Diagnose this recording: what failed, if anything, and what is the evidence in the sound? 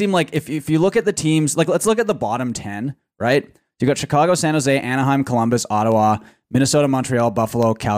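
Word clock ticks on the digital link: from 0.36 s to 7.63 s, about twenty sharp single-sample ticks of uneven strength come at a steady period of roughly 0.4 s, fitting a receiver clock that is not locked and is off by around 50 ppm. The strict periodicity separates them from random dropouts.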